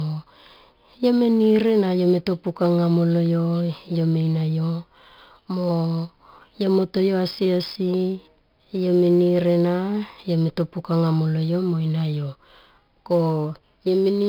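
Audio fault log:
Throughout: 4-bit ADPCM compression, heavy here: gritty hiss rides every loud syllable, nothing above 5.3 kHz, and the rate fits about 44 kbps.
Throughout: sample clock jitter of a few microseconds adds a fine roughness about 40 dB down, growing on loud, bright speech and gone in pauses.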